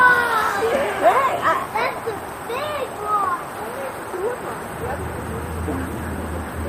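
No technical faults can be heard anywhere in the audio.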